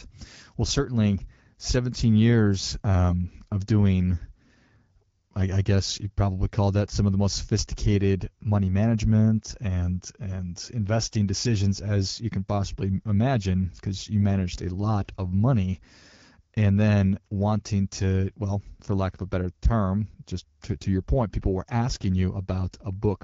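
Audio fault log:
No faults logged; the speech has the band-limited, lightly coded sound of the AMR wideband (HD Voice) codec at a rate that fits 12.65 kbit/s.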